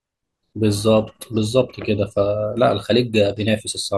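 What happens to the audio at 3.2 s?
At 3.2 s the speech plays through cleanly, with no dropout, click, distortion or other fault at that point.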